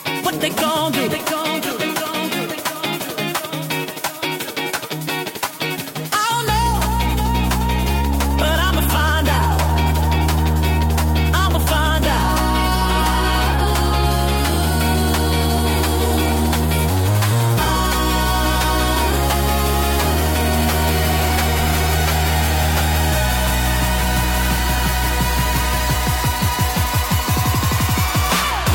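No technical faults are audible.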